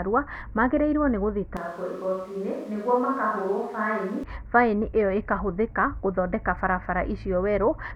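From 1.57 to 4.24 s the speech abruptly goes roomy, hollow, quieter and noisier, likely a switch to a distant microphone.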